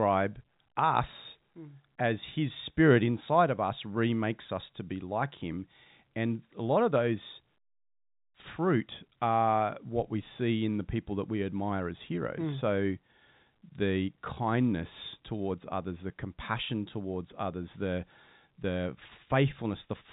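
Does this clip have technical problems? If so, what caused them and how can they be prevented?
No, there's nothing wrong here; the speech simply has the narrow telephone sound of G.711 coding, with nothing above about 3.8 kHz, so there's no fault to prevent.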